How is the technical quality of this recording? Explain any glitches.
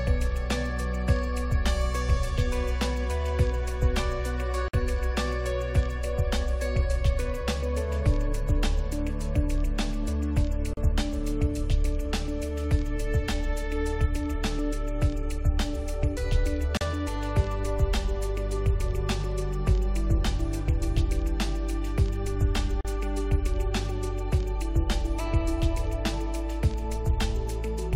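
Four short dropouts break the audio at 4.68, 10.74, 16.77 and 22.81 s, roughly every 6 s: brief silences of about 52 ms first, then 37 ms, before the sound resumes where it stopped. These are gaps at joins of encoded pieces, where separately encoded segments kept their encoder start delay and final-frame padding.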